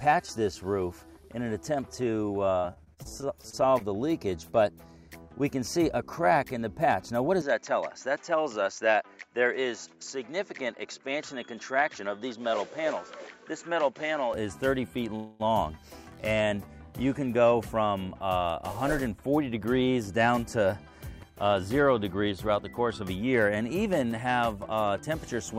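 From 2.59 to 3.82 s there's a burst of repeated packet loss, and it gives that choppy, robotic edge. About a dozen short holes land in quick succession, the longest around 43 ms. Each one gets papered over by stretching the last bit of sound, so roughly a fifth of that stretch is made-up fill, about 240 ms in all, and around 180 ms of real material simply never arrives.

At 7.42 s the tone drops into something narrower and boxier, and it stays that way until 14.34 s. Nothing comes through above about 7.6 kHz, so the top end is shaved off. There's no gap at the changeover and the loudness holds roughly steady. A faint new noise floor sits about 55 dB under the signal. That combination points to the input switching to a poorer device, most likely a different mic or a headset's call mode, before switching back.

Right after that, from 15.16 to 15.42 s, you get a call audio freeze. For about 0.24 s the sound hangs on itself as a smeared, sustained continuation rather than dropping to silence. 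When it picks up again nothing has been skipped, so everything after that point just runs about 0.24 s later. That points to packets stalling in transit and the jitter buffer draining empty while the receiver bridges the wait.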